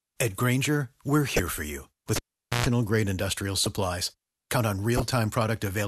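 At 1.33 to 1.40 s the speech is broken by a corrupt frame decoded: a short burst of damaged compressed data played anyway, so energy lands at the wrong frequencies and comes out as a fairly loud chirp, blip or burst of noise spanning a few frames. The same fault returns, a little quieter, at 3.64 to 3.67 s and 4.96 to 5.02 s. Unlike a plain dropout or click, each one has a brief pitched or noisy shape.

Between 2.16 and 2.66 s a cable pulled and plugged in cuts the speech: a pop, roughly 0.45 s of near silence, then about 0.12 s of 60 Hz mains buzz as only the tip makes contact, and a second pop as the sound comes back. The buzz and the paired pops set it apart from a network or decoder gap, which would go silent without hum.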